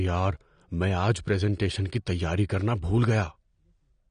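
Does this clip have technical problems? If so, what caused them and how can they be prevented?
Yes. AAC compression damage runs throughout the speech. Nothing is present above 9.7 kHz, and the audio sounds dull and smeared, with a warbly, fizzy texture on sibilants and held sounds. This is likely AAC-LC at a low bitrate, around 32 kbps. With too few bits available, the encoder drops the top of the spectrum and leaves gaps or substitute noise in the bands it keeps. To prevent it, encode at a higher bitrate or keep an uncompressed master.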